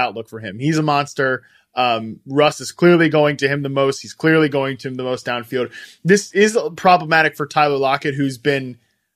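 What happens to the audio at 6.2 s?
Nothing goes wrong at 6.2 s; the speech carries on intact through that moment with no fault to be heard.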